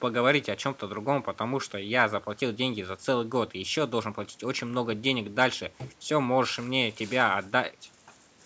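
No technical faults can be heard in this speech.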